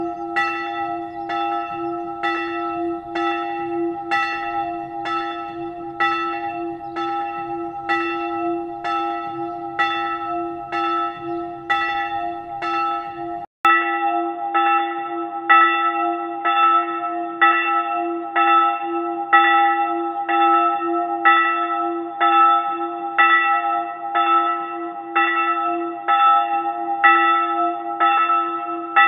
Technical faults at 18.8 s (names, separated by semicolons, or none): input switched to a poorer device